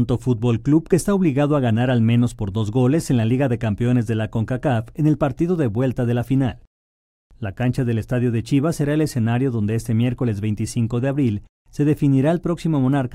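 There are no technical faults to describe in this audio.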